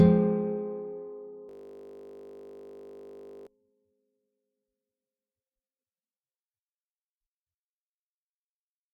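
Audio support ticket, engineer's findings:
System hang loop, 1.49–3.47 s: steady 50 Hz buzz as a 20 ms fragment repeats 99 times; driver stalled while hardware kept replaying its ring buffer.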